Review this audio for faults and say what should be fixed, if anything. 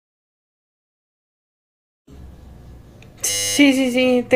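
From 3.3 to 3.57 s the speech gives way to a steady 100 Hz buzz, a system hang loop. The driver stalled while the hardware kept replaying the same 10 ms stretch of its ring buffer, which fits a buffer of about that length, and almost no audio appears to be lost. On a waveform the segment shows one identical 10 ms cycle stamped out end to end. A spectrogram shows flat horizontal lines at 100 Hz and its multiples. Prevent it with a watchdog that mutes output when the buffer stops being refilled.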